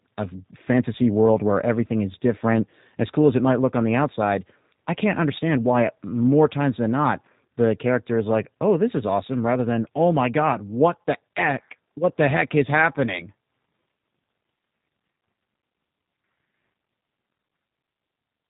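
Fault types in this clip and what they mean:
G.729 codec: a low-rate VoIP coder, consistent with 8 kbit/s, rebuilt the speech from a filter model and pulses. It sounds plainly rough and synthetic, with nothing above 3.8 kHz.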